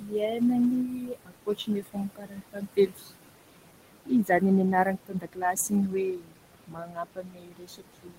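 A noise suppressor is running over this speech clip, pulling down what it judges to be steady noise by about 21 dB frame by frame, so the room noise, which sits about 12 dB under the speech, dips between phrases and surfaces beneath them. The same suppressor also mistakes parts of the speech for noise and turns them down with the background, cutting speech at 0.00–0.42 s, 0.84–3.10 s, 4.06–4.43 s, 4.72–6.41 s and 6.67 s to the end. Drops reach about 14 to 22 dB, deepest in the later stretches. Roughly a second and a half of the second span and about a second of the fourth are affected, so soft consonants and word endings sound swallowed or fade out.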